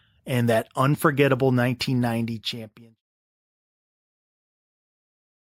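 The speech signal holds steady with no audible technical faults, apart from an intentional, gradual drop in level that begins roughly two seconds in and settles into silence by 3.02 s, with no click or hard edge.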